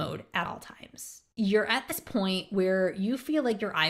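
At 0.45 s, the speech skips ahead by roughly 40 ms, which points to about two 20 ms compressed frames skipped. It happens again from 1.89 to 1.92 s, with roughly 70 ms lost, or about three frames. The decoder never played that audio, so the sound jumps forward. A spectrogram shows a brief vertical break where the harmonics abruptly change.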